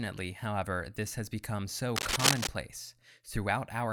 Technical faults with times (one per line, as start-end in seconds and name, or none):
1.96-2.47 cable scratch noise